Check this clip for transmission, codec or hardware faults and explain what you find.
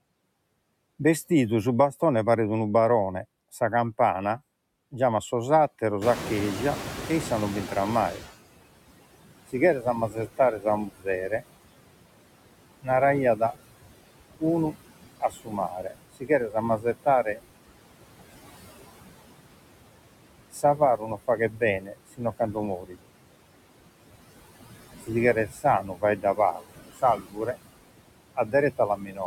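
The faults come from noise suppression, not from the transmission path or the hardware. Three kinds are audible.

Noise suppressor artifacts run through the whole clip. The suppressor pulls down the bands it judges to be steady noise, by about 21 dB, frame by frame. The background sinks between words and swells under them.

The noise suppressor is catching up from 6.01 to 8.34 s, just after "giamat sos". Room noise jumps by about 20 dB near 6 s. The noise estimate lags, so the louder noise gets through at first. Over about 2.3 s the estimate adapts, and the noise sinks by about 17 dB.

Speech is cut by the noise suppressor in five spans: 9.52 to 11.42 s, 15.2 to 17.4 s, 20.51 to 23.1 s, 25.03 to 27.56 s, and 28.36 to 29.2 s. After the rise the room noise sits about 13 dB below the speech, and the suppressor mistakes soft speech for noise. It turns those parts down by about 17 to 22 dB. 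Each span loses roughly 0.4 s to a second of sound, and the speech there sounds swallowed or faint.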